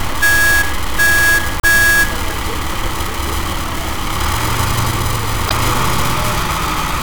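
At 1.57 s (about 70 ms) and 5.47 s (about 50 ms), damaged data in the compressed stream makes the decoder misread frames and lose sync, producing a brief chirp, squawk, click or short hole.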